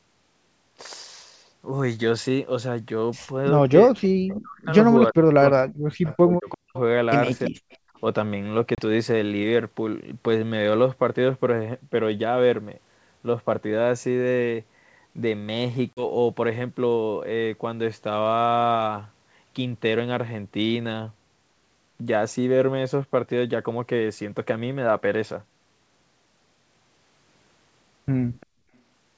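From 3.85 to 4.74 s, again from 5.1 to 6.76 s and briefly at 7.5 to 7.71 s, the speech dips by about 40 dB. It's likely speech suppressed in double talk: the echo canceller couldn't tell its own talker from the far side's echo, so it turned everything down.

Faint delayed copies sit at 6.1 to 6.17, 7.45 to 7.5, 7.71 to 7.77 and 28.4 to 28.46 s, 345 ms behind the source and about 20 to 35 dB down. That's likely echo leak, loudspeaker pickup slipping past the canceller and coming back.

At 8.75 to 8.79 s and 15.93 to 16.07 s there's packet loss on an ADPCM call, a 30 ms and then a 40 ms hard-edged hole. The G.722 decoder's predictor loses step, so the speech returns slightly distorted before settling.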